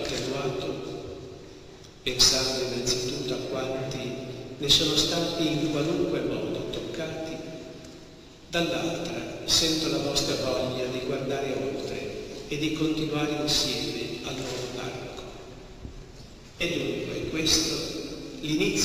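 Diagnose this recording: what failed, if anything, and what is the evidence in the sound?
Nothing failed; no stage shows any audible defect.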